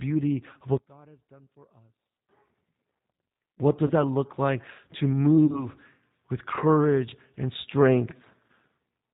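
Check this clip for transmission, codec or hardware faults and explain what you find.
Three faults are audible: G.729 coding throughout, one channel inverted early on, and three packet-loss dropouts concealed by the codec.

Throughout, the G.729 codec at 8 kbit/s rebuilds the speech from a filter model and sparse pulses, cutting everything above 4 kHz and leaving the speech plainly rough and synthetic.

From 0.77 to 2.29 s, the sound drops by about 27 dB to a faint residue. That is most likely one channel inverted, with the shared centre content cancelling when the channels are summed to mono.

VoIP packet loss concealed by the speech codec occurs at 3.87 to 3.93 s, just before "that look like to"; at 5.46 to 5.66 s, just after "that look like to"; and at 8.46 to 8.50 s. Each sounds like a single lost 30 ms packet. The decoder extrapolates from the last frame, producing a fading stretch, and the speech stays weakened briefly afterwards.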